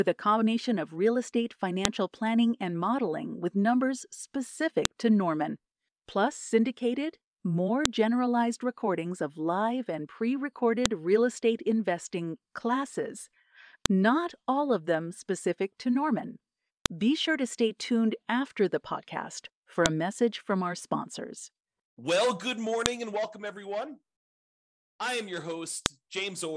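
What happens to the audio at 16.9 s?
At 16.86 s the speech is interrupted by a file header played as audio. Where two separately encoded pieces were joined, the header bytes of the new piece were not stripped and were read as sample values. The sound is a brief, sharp, loud click lasting about a millisecond, unrelated to the speech around it. On a waveform it shows as a near-vertical spike of garbage values. On a spectrogram it appears as a thin full-height broadband stripe. The stream was built from 3-second pieces.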